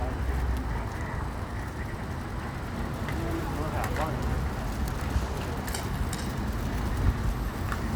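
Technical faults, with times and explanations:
1.35 to 1.39 s, chunks out of order: one block of audio, about 11.6 ms long, reached the output three blocks late and was played after the three blocks that should have followed it. Nothing is missing, but the sound within those few tens of milliseconds plays back in scrambled order, heard as a brief jumbled stutter, with three hard joins where mismatched waveforms meet.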